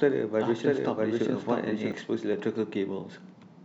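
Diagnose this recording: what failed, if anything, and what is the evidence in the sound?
A doubled audio track runs from the very start until 1.92 s. The speech is heard twice, with a second copy about as loud as the first trailing by roughly 0.7 s, dry and full-band, then cutting off abruptly. The likely cause is the same signal being captured again through a slower path, or an edit leaving two misaligned copies. On a waveform the same envelope shape recurs at that offset, and the spectrogram shows the identical pattern overlaid, ending with a sharp vertical edge.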